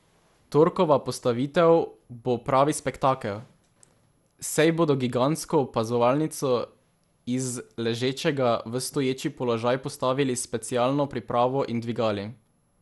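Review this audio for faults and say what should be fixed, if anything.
Throughout the speech the sound is swirly, smeared and hollow, consonant attacks blur, and nothing remains above 11.9 kHz. This is likely generation loss: about four lossy passes, each requantising on a shifted frame grid, consistent with MP2 near 96 kbit/s. Keep a lossless master and encode only once, at the final delivery step.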